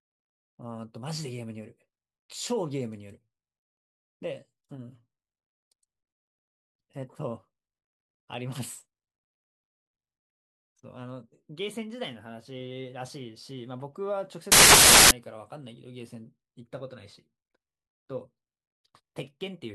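From 14.52 to 15.11 s the speech is replaced by loud, harsh broadband noise, the sign of samples built from the wrong bytes. The reader misassembles each sample, so the rapidly changing low bits dominate the values, producing noise that sounds close to white where the speech is loud.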